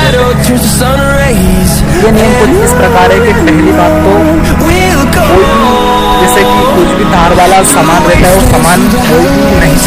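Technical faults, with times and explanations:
Throughout, hard clipping: every loud moment carries a harsh, buzzing fuzz rather than occasional crackle, because the overload is heavy, with the signal driven about 18 dB past what the stage could pass. Roughly one sample in seven hits the ceiling and is sliced flat. Those squared-off tops generate a spray of harmonics reaching high into the spectrum, which is why peaks sound gritty and brittle instead of simply loud.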